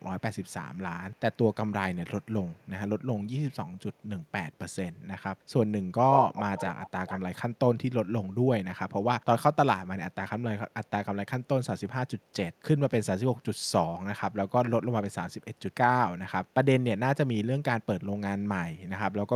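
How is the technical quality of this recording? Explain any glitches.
Quality is marred by echo leak at 0.46–0.52, 1.11–1.37, 2.44–2.66, 6.16–6.9 and 7.07–7.2 s. A loudspeaker-side echo canceller likely passed its microphone pickup back. This returns speech 196 ms late and very faint at first, then 128 ms late at nearly full level, and about 10 dB quieter in the last event.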